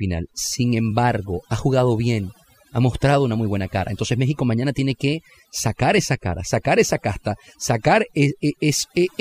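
Overdone noise removal runs through the whole speech clip, from start to finish. A noise reduction stage was pushed too hard on a noisy source, so every frequency band that sat close to its noise estimate was pulled far down or cut out entirely, taking the softer parts of the voice along with the noise. The background in the pauses drops and breaks up into twinkling specks.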